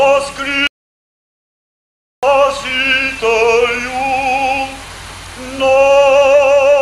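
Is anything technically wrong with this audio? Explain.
Yes. From 0.67 s to 2.23 s there is an audio dropout to silence. The input feeding the recorder was likely lost for that stretch, perhaps through a disconnected device, a failed link or a stray mute, while the recording carried on writing silence. The sound cuts off abruptly in mid-flow, leaving about 1.56 s of silence with no room tone beneath it, and then resumes just as suddenly. Whatever occurred during that gap is gone.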